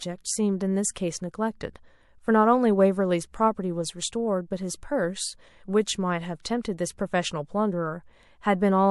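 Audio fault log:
0.94–0.96 s, 6.43–6.45 s and 6.63–6.65 s: pre-echo. The codec stayed on long transform blocks, which points to a window of about 36 ms without short-block switching, so noise meant for each sharp onset spreads back 22 to 24 ms, about 17 to 20 dB up, as a hiss that smears the attack.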